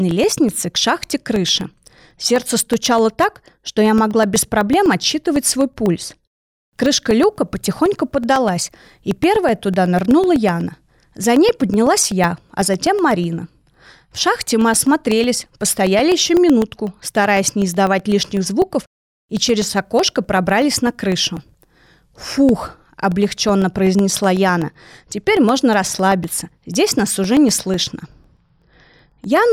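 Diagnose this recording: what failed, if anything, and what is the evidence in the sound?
The driver or buffer stage failed with periodic USB or driver dropouts: every 0.125 s something stalls the audio path and about a millisecond of samples becomes silence. From 0.11 s to 29.37 s this gives around 200 evenly spaced ticks, heard only during speech.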